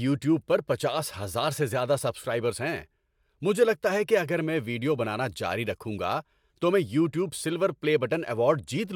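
No dropouts, clipping, glitches or other transport or device faults are audible anywhere in this speech recording.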